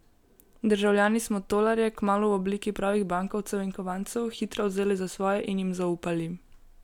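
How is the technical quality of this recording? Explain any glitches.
No audible glitches or faults.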